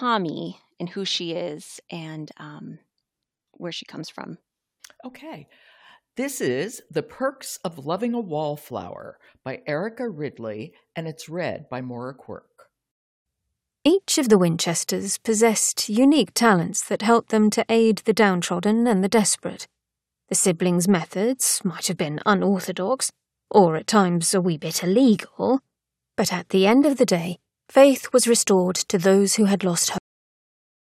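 At 29.98 s the speech has a cut-off end: the final stretch of audio was never written out, so the sound stops mid-utterance and falls straight to digital silence. Unlike a fade-out or a natural pause, there is no decay or room tail.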